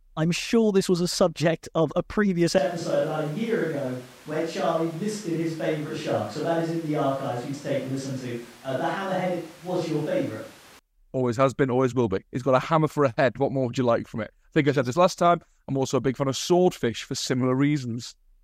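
At 2.58 s, right after "subject of a previous", the speech abruptly turns roomy and hollow, loses low end, drops by about 5 dB, and carries background noise around 25 dB below the speech. It snaps back at 10.79 s before "always has been always". This is likely a switch to a distant microphone. Added reverb or a bass cut would not also lift the noise floor, and neither would start and stop this cleanly.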